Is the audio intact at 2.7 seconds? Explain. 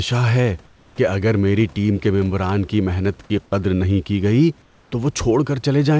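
Yes, the speech at 2.7 seconds is intact, with no fault to be heard at that moment.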